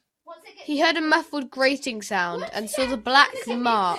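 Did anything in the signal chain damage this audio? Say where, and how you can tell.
No, nothing in the signal chain damaged this audio.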